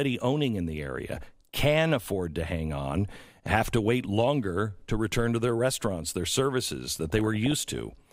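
DAB burbling shows up three times: 1.17 to 1.27 s after "owning in the", 3.09 to 3.61 s after "afford to hang on", and 6.95 to 7.93 s after "their restaurants their services". Bit errors, running at well under a percent, slipped past error correction, so short blips of noise land in individual sub-bands, giving a burbling sound.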